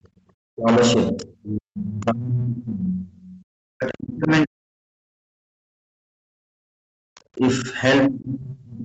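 Speech recorded over a call, driven into hard clipping from start to finish: some stage received a signal about 16 dB hotter than it could pass, so around a fifth of the samples are sheared flat at the ceiling. Those squared-off peaks generate harmonics well above the voice's own spectrum, heard here as a constant harsh fuzz riding on every loud syllable rather than occasional crackle, since the overload is heavy and continuous. The echo canceller also produced background gated by the echo canceller: it clamped the microphone down while the loudspeaker was active, from 0.0 to 0.13 s with a drop of about 28 dB, and again from 6.78 to 7.1 s with a drop of about 40 dB. The room tone briefly dips out and returns as the canceller releases. The talker's own speech is suppressed in double talk, likely because the far side was talking at the same moment and the canceller could not tell the near voice from the loudspeaker echo, so it attenuated everything. 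This happens from 0.41 to 0.69 s, 1.12 to 3.53 s, 3.76 to 6.5 s, 7.62 to 7.66 s, and 8.08 s to the end. The voice sinks by as much as roughly 30 to 40 dB in the longer stretches, and by only a few dB in the short 7.62 s dip. Between 7.15 and 7.21 s there is a faint scrap of the other side's voice leaking through, likely loudspeaker output the canceller left in the microphone signal, sitting far below the talker at around 35 dB down. The audio is band-limited to 8 kHz, as the call codec path imposes.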